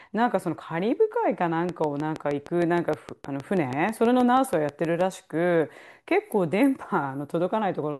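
A speech recording with a steady train of clicks ticking over it from 1.69 s to 5.02 s, about twenty near-identical pops at a regular 6.3 per second, peaking around 10 dB above the speech and audible in pauses, likely interference from nearby equipment or a faulty connection or power supply.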